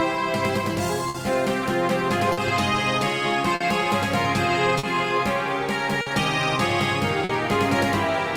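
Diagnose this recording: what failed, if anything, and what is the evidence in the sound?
Network clock drift between sender and receiver: the sender's clock runs roughly 4% slow, so the receiver's jitter buffer keeps draining and the playback timing hiccups throughout.

Short stalls from late packets, at the buffer stage: it runs empty at 1.09, 2.32, 3.55, 4.78, 6.01 and 7.24 s, each holding the last sound for about 50 ms before resuming intact.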